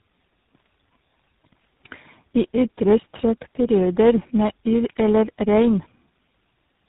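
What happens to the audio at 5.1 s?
At 5.1 s, as throughout, there is tandem speech coding. Three codecs re-encoded each other's output, so speech sounds rough, warbly and muffled, empty above 3.8 kHz.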